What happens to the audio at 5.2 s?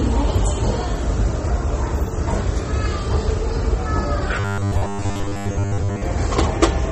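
At 5.2 s the audio is inside a stretch of robotic sound from repeated short buffers, running from 4.40 to 6.02 s. New audio likely arrived too seldom, so roughly 10 ms slices were looped over most of that span, forcing a rigid, metallic 100 Hz buzz. MP3 compression is also audible here: a starved encoder has left watery, swirling smear, which fits a low bitrate around 32 kbps.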